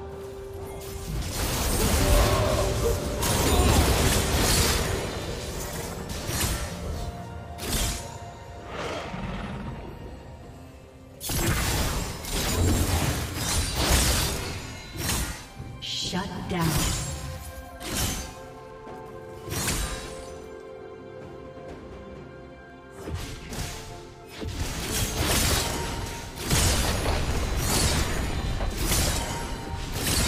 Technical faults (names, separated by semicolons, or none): clock drift buffer slips